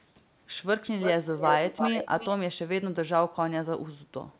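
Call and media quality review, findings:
Echo leak, 0.82–1.11 s and 1.38–2.3 s: delayed copy of the speech about 338 ms behind, roughly 5 dB below it. Likely residual far-end echo passing the echo canceller. A discrete, fixed-lag repeat, not a diffuse reverb tail. Sound band-limited to 4 kHz, consistent with G.711.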